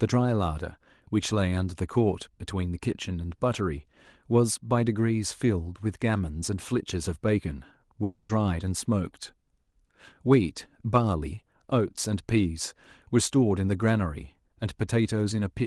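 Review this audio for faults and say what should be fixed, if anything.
Long network dropout, 8.03 to 8.31 s: the speech gives way to a buzzy, smeared continuation of the last sound that fades over about 0.26 s. Delivery then resumes with that stretch lost, likely because packets stopped arriving on the call link. To prevent it, use a more stable network connection or enable forward error correction and redundancy in the call codec so short losses can be recovered.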